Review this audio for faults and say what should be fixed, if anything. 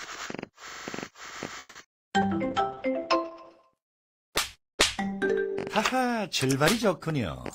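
At 1.59–1.77 s a call audio freeze stretches the last sound for about 160 ms, fading to near-silence. It was likely a packet stall that emptied the jitter buffer. On a spectrogram it looks like a smeared, decaying band.

At 1.83–1.86 s, short concealed packet loss replaces about 20 ms of lost audio with 10 ms of synthesised continuation. It shows as a brief blurred patch or tick in the waveform.

At 1.92–1.95 s a skip ahead drops roughly 70 ms of audio, splicing both sides together. The waveform shows an abrupt joint with no gap.

From 2.23 to 5.82 s a call bitrate drop takes the stream from 96 to 11 kbps for 1.19 s at its lowest. Bandwidth falls from 20 kHz to 8 kHz, which appears as a hard spectral ceiling, and the sound turns rough.

From 2.28 to 3.83 s a jitter buffer slow-down repeats short segments, adding 86 ms and playing at 95% speed. Pitch stays unchanged, and the spectrogram shows slightly stretched, repetitive texture.

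To prevent these, stabilise the network path and give the jitter buffer more headroom so stalls, losses and bandwidth collapses don't force concealment or bitrate cuts.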